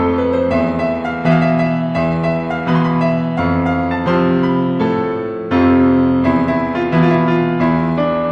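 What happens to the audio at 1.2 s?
At 1.2 s the music plays through intact, with no dropout, click, distortion or other fault.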